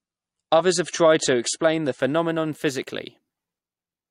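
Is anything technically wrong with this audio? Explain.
Yes. From 0.0 to 2.0 s the speech shows an adaptive stream starting at a low bitrate. To start playback quickly, the player fetched a low-bitrate version first and then switched to a better one once it had measured the connection. During those first two seconds there is nothing above 10.5 kHz, so the speech sounds dull and smeared with codec artefacts, which fits MP3 at about 40 kbit/s. At 2.0 s the treble returns abruptly with no gap, consistent with a step up to around 128 kbit/s. On a spectrogram the top band is empty until 2.0 s and then fills in along a sharp vertical edge.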